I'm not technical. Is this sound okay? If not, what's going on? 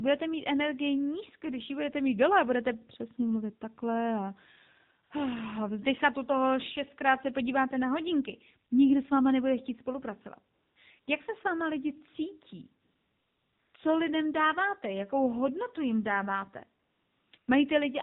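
No. This speech has passed through the AMR narrowband mobile codec, the speech compression used on older mobile phone calls. It keeps only the lower part of the sound, so everything is boxed in and thin, like a phone call. Because the codec was squeezed hard here, voices also take on a buzzy, artificial edge. A merely muffled recording would sound dull, but not synthetic like this.

The second fault is AMR comfort noise. At 5.04, 10.54 to 10.76, 11.00 to 11.08, 12.82 to 13.74, 16.82 to 17.32 and 17.38 to 17.48 seconds, the phone decided nobody was talking and stopped sending sound. The receiving end filled each gap with a smooth, even hiss it made up itself. Unlike a dropout, these gaps aren't silent. The real background is swapped for that artificial hiss, which switches on and off.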